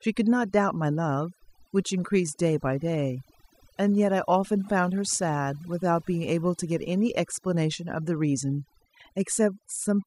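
Overdone noise removal runs through the whole recording. The noise reduction was set too aggressively. It pulls down any frequency band close to its noise estimate, taking quiet parts of the speech with it. Pauses fall to near silence with twinkling specks.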